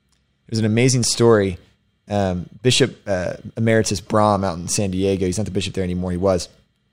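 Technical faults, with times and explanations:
No technical faults detected in this speech recording.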